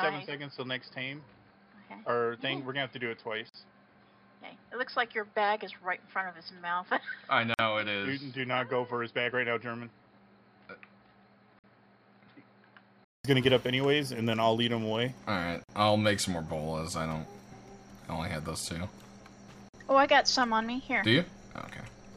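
From the start to 13.25 s the sound is dull and boxy, with nothing above 5.1 kHz, about 5 dB quieter, and carrying a faint new noise floor roughly 45 dB down. It clears after a 200 ms silence. This is likely an input switched to a poorer device, a narrowband microphone or headset profile, before the recording returns to the fuller input.

Short dropouts of about 46 to 49 ms cut into continuous sound at 3.49, 7.54, 11.59, 15.64 and 19.69 s, every 4 s. Each has smeared edges, and the sound resumes where it stopped. These are gaps at joins of encoded pieces: separately encoded 4-second segments were joined with their leading delay and end padding left in.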